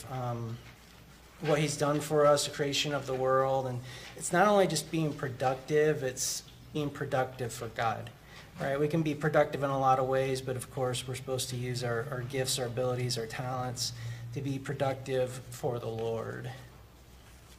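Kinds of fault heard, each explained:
Compressed frames skipped: at 6.72 to 6.77 s and again at 7.87 to 7.92 s, a run of about four whole frames, each 42.7 ms long, never reaches the output, so the sound lurches forward by around 150 ms. A spectrogram shows an abrupt change in texture. The waveform shows a sudden envelope discontinuity.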